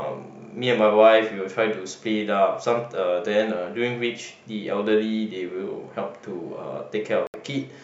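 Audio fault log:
7.27–7.36 s, Bluetooth dropout: the speech cuts to silence for about 70 ms, then resumes further on, likely wireless packets arriving too late and being discarded.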